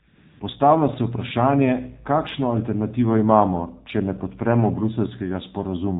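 From 0.08 to 0.40 s, AMR comfort noise replaces the real background: the sender stopped transmitting speech frames for about 320 ms, so the receiver fills the gap with smooth synthetic noise that switches in and out. Throughout, the AMR narrowband mobile codec squeezes the speech into a vocal-tract model below 4 kHz at a low bitrate, consistent with a 7.4 kbps mode, leaving it plainly muffled, buzzy and synthetic.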